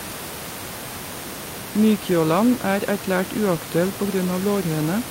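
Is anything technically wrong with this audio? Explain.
No, nothing here is a technical problem; the room noise you can hear sits about 11 dB below the speech and is simply part of the space the microphone was in.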